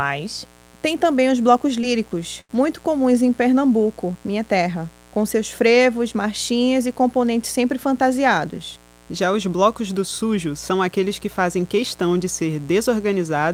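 A raspy, steady buzz runs under the speech from start to finish, sitting roughly 25 dB below it. This is mains buzz at 60 Hz. Sharp switching spikes, such as those from a dimmer, a rectifier or an unshielded lead, entered the signal twice per mains cycle. That produces a dense stack of harmonics climbing into the kilohertz range rather than a smooth hum, which is why it sounds gritty instead of tonal.

Just after "também os blocos", from 1.81 to 1.85 s, there is a brief smear where the sound wobbles for an instant before settling. This is short concealed packet loss. About 20 ms of the stream never reached the decoder in time. The receiver bridged the hole by extending the preceding sound, following its pitch or shaping noise, and then cross-faded back into the real signal.

Overlapping that spot, from 1.83 to 1.85 s, the audio turns rougher and noisier for a moment. The same happens again from 2.53 to 2.55 s, just before "comuns em". 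Both are a lost packet rebuilt from error correction. In each case a 20 ms packet went missing, but the next packet carried a low-bitrate copy of it through Opus in-band forward error correction. The decoder played that coarser copy, so there is no gap, only a patch of degraded texture.

From 2.41 to 2.51 s the sound hangs on, fading, and then jumps ahead, with a piece skipped. This is a burst of packet loss. Roughly 80 ms of consecutive audio was lost or arrived too late to play. The receiver stretched the last sound and turned it down as the gap lengthened. Playback then resumed further along, so the content in between is simply absent.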